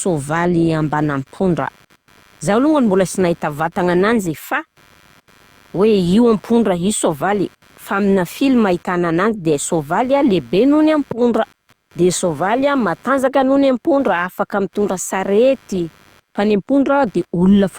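From start to finish, computer activity noise sits under the speech. It is a faint buzzing chirp, pulsing around a hundred times a second, roughly 35 dB below the voice. The computer's changing load disturbs the shared audio ground. The noise follows that activity, not the speech.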